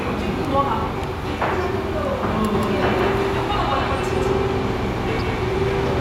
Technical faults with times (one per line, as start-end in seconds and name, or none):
2.54-6.00 doubled audio track
5.17-5.21 DAB burbling